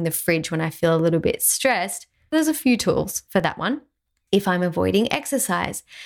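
A short burst of gritty crackle tears through the speech from 3.23 to 3.44 s, right after "there's a few tools". This is processor overload crackle: the processor kept missing deadlines for its tiny buffers, around a millisecond and a half each, and every miss left a hard-edged gap of silence.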